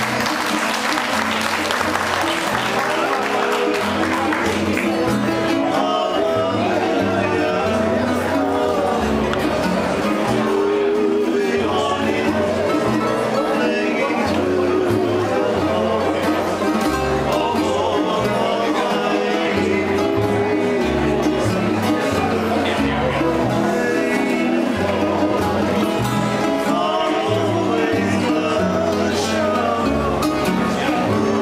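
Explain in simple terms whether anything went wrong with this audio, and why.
Nothing went wrong here: there are no dropouts, glitches or other technical problems to point to anywhere in the recording.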